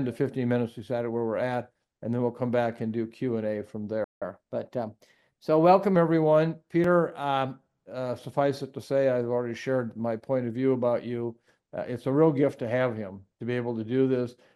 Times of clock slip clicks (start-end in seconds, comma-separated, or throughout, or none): none